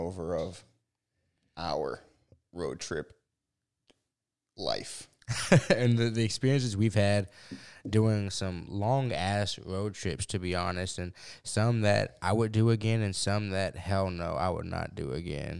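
No technical faults can be heard anywhere in the speech, with the signal holding steady and intact throughout.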